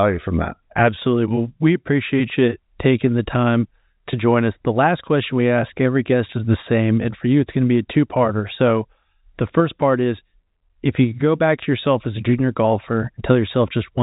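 No faults can be heard in this speech clip. It carries the narrow band of G.711 telephone coding, with nothing above about 3.8 kHz and at most a faint trace of the low-level noise that follows the signal's level.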